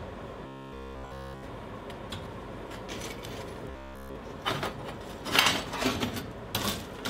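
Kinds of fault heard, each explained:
Robotic sound from repeated short buffers: a rigid metallic buzz at 66.7 Hz, likely a looped 15 ms slice; unlike steady hum, it loosely follows the sound's shape.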